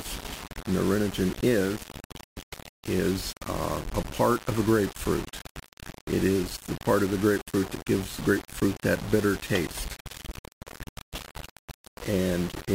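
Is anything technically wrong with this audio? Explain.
Yes. Throughout, the audio has grainy distortion that tracks the signal, with error only about 15 dB down. The likely cause is low bit depth without dither, rounded to 5 bits. Unlike dithered requantisation's steady hiss, this grit rises and falls with the sound itself.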